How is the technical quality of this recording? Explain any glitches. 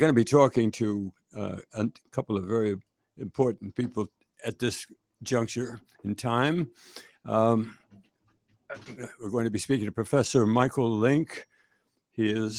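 The recording has two audible glitches, both sound cut by the noise suppressor. From 7.78 to 8.67 s, and again from 11.52 to 12.17 s, the suppressor mistook sustained parts of the sound for noise and pulled them down by as much as about 18 dB. That cost roughly half a second of material in the first stretch and about a third of a second in the second. Steady and decaying portions sink or fade away early, while sharp onsets survive. On a spectrogram, the energy there thins out abruptly. On the waveform, tails shrink toward the floor.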